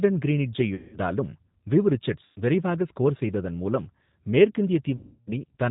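A speech clip carried throughout by the G.729 codec at 8 kbit/s, where the low-rate pitch-and-pulse rebuilding leaves the voice audibly rough and synthetic; a spectrogram shows nothing above 4 kHz and smeared, grainy harmonics. VoIP packet loss concealed by the speech codec breaks in at 0.75–0.99 s, 2.26–2.38 s (just before "விரைவாக ஸ்கோர் செய்ததன் மூலம்") and 4.97–5.31 s. Gaps of roughly 180, 100 and 300 ms are filled with fading extrapolated sound, which fits runs of 20 ms packets going missing. These show as steady, decaying bands and a shrinking waveform envelope before speech recovers.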